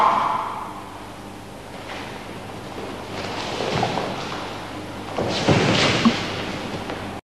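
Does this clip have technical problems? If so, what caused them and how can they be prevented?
Yes. At 2.78 s there is an abrupt jump in the sound, as though a short stretch, something like 70 ms, has been skipped with no gap of silence between the two sides. This is likely a dropped buffer (overrun): the recording software failed to read a block of samples before the audio hardware overwrote it, so that piece was lost and the surrounding audio was spliced straight together. Using larger buffers and keeping the recording process from being starved of CPU time prevents this.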